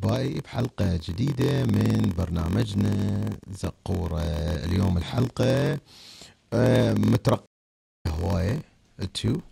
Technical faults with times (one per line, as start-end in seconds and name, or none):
0.00-9.51 block size mismatch (padded)
7.46-8.06 stream reconnect